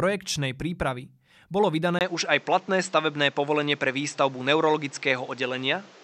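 Speech, where the input likely switched to a poorer device at 1.99 s, after "prípravy bolo": a 20 ms gap, then duller sound with nothing above 8 kHz, a level shift of about 5 dB and new background noise.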